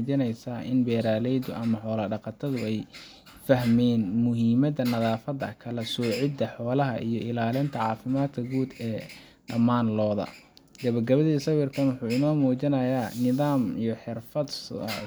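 No technical fault can be heard anywhere in this speech recording.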